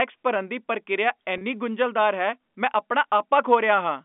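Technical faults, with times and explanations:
1.38–1.41 s, packet loss with pitch repetition: a 30 ms gap, which fits one lost packet, is filled by repeating the last pitch period, giving a brief buzzy hold before "ਗੁੰਝਲਦਾਰ ਹੈ ਮੈਂ ਆਪਣਾ".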